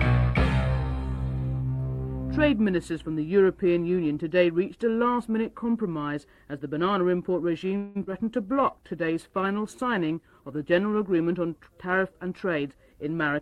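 At 7.77 s the sound stalls for about 0.2 s, with the last bit of it stretched into a fading buzz before things carry on from where they left off. That's a call audio freeze, likely packets held up in transit while the jitter buffer ran dry, so a 179 ms gap gets inserted and nothing is actually lost.

Right after, at 8.03 s and again at 8.11 s, there are two short concealed packet losses. Each time about 20 ms never reached the decoder, and the receiver bridged the hole by extending what came just before and blending back in, which gives a quick smear or wobble.

Sandwiched between those, at 8.07 s, playback does a skip ahead. Later audio was already queued, so something like 70 ms in between was dropped and the two sides were butted together almost directly. It's a small forward jump that claws back roughly 50 ms of delay.

From 8.36 s to 11.34 s there's a call bitrate drop. The encoder was pushed from 128 kbps down to 21 kbps and stayed at the bottom for about 2.9 s, so the coding gets coarse and the sound turns rough and dulled until the rate comes back up.

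Inside that stretch, from 8.46 s to 8.89 s, there's a jitter buffer slow-down. The receiver padded in 64 ms by repeating tiny slices over and over to rebuild its reserve, so the sound runs at 87% speed with the same pitch and comes across drawn out, maybe a touch warbly.

Finally, from 12.14 s to 13.40 s, there's the opposite, a jitter buffer speed-up. Too much audio had piled up in the buffer, so around 150 ms of short pitch-period chunks got trimmed out. The sound runs at 109% speed at the same pitch and feels a bit hurried.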